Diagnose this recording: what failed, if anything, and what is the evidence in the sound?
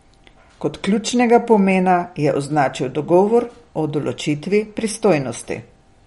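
Codec stage, likely MP3 compression: watery, swirly speech throughout, nothing above 11.2 kHz, and a flat spectrogram ceiling with flickering gaps where bit-starved bands drop out.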